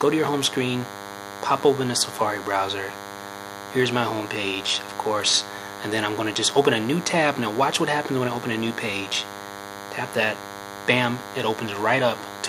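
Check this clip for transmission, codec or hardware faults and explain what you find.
A hardware fault runs through the whole clip: DECT cordless phone buzz. A nearby DECT handset or base transmits a burst every 10 ms, which the audio circuitry rectifies, laying a thin, steady 100 Hz buzz rich in harmonics under the sound, about 15 dB below it.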